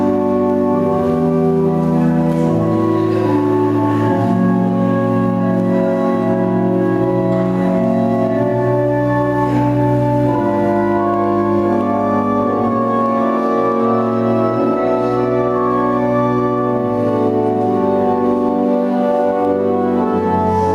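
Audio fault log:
throughout gain pumping: input gain likely set far too high, with a fast limiter pulling each loud sound down, so level swings around 10 dB and sounds squashed.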